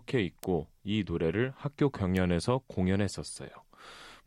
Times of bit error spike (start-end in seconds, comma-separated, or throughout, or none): 0.44, 2.17